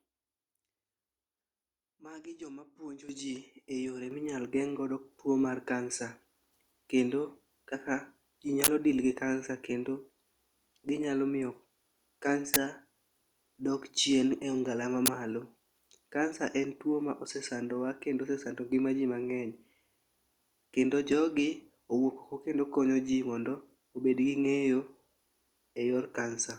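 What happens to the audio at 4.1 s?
A microphone volume stepped up at 4.11 s, between "jomapuonji ji e yore" and "minyal geng'godo tuo mar". The call software judged the input too quiet and raised the device's input gain in one jump of about 7 dB, so speech and background both get abruptly louder together.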